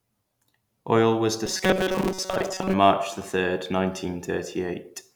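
From 1.46 s to 2.73 s the speech collapses into a rigid, metallic buzz pitched at 188 Hz, still loosely tracing the syllables. This is robotic sound from repeated short buffers, likely caused by audio arriving too seldom, so the playback loops a fragment of about 5.3 ms to fill the gaps. Most of the stretch is this repeated material rather than fresh audio, which imposes the fixed buzz.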